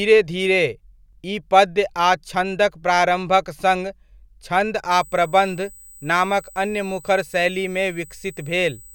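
From 4.91 s to the end, a steady 8 kHz whine sits well below the speech: USB whine, 125-microsecond bus microframes leaking through power or ground.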